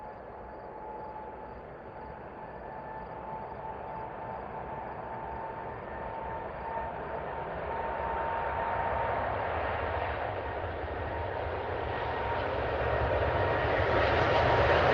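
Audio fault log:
Nothing to log here: these sounds come across fine over the call path, an Opus link at about 20 kbps whose top end reaches up to roughly 8 kHz.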